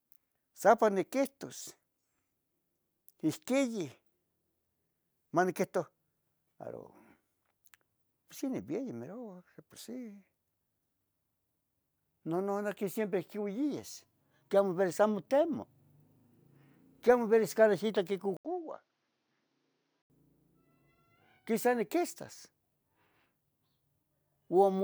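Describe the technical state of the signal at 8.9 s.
At 8.9 s the speech signal is intact, with no audible fault at that moment.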